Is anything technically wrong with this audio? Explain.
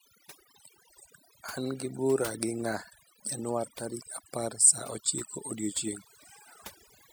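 Yes. Throughout the speech there is overdone noise removal: a noise reduction stage was set far too aggressively, so any frequency band sitting close to its noise estimate gets pulled down hard or shut off entirely. The quieter parts of the voice fall below that threshold and are stripped away along with the noise. The gaps between phrases collapse into near silence dotted with twinkling specks.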